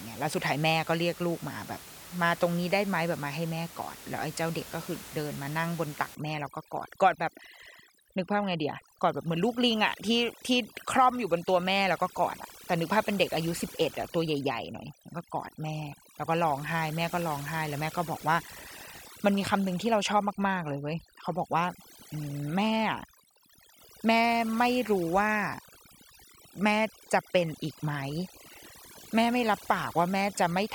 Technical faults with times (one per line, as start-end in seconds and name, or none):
6.15-30.75 overdone noise removal